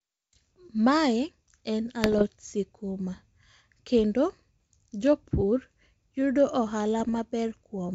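Bit errors on an ADPCM link at 0.36–0.50 s (just before "mae en"), 2.04–2.24 s (just after "mae en"), 4.60–4.66 s and 7.00–7.18 s. Flipped bits, roughly 0.3 to 0.5 percent, upset the decoder's step size and predictor, giving pops, rough bursts and brief level jumps.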